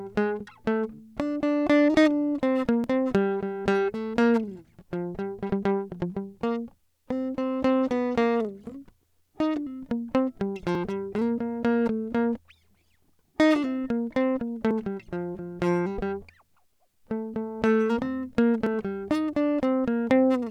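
The music skips forward at 2.84, 6.80, 10.75, 14.71 and 18.66 s, each time losing a few tens of milliseconds. This is likely audio missing between chunks: the recorder handles the sound in blocks about 4 s long and drops a sliver at each handover, joining the two sides directly. Unlike a network dropout, there is no gap of silence, and the jumps fall at a steady interval rather than at random.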